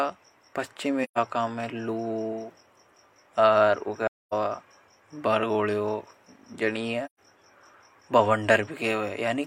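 Speech with three soft-edged dropouts caused by AAC frame loss with muting, at 1.04–1.18 s, 4.06–4.33 s and 7.05–7.19 s. Whole frames went missing, and the decoder zeroed their spectrum. The overlapping windows then faded the sound out and back in, leaving holes of about 128 ms, 256 ms and 128 ms. On a spectrogram each appears as a blank column across all frequencies with tapered edges. The waveform shows a smooth envelope dip to silence.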